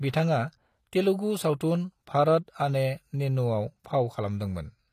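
Throughout the speech, the treble sounds synthetic: s sounds come out gritty and lispy, and nothing is present above about 14.9 kHz. The likely cause is HE-AAC compression at a low bitrate, around 24 kbps, with spectral band replication rebuilding the upper band from copied lower harmonics.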